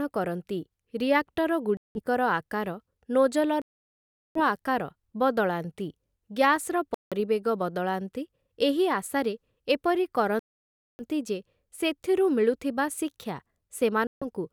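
The speech drops dead to silence five times: at 1.77 s for about 181 ms, 3.62 s for 737 ms, 6.94 s for 173 ms, 10.39 s for 597 ms, and 14.07 s for 146 ms. Each time it picks up again afterward. That's the signature of a Bluetooth stall, likely from interference holding packets up, so the headphones' buffer ran dry and playback waited for the resent data.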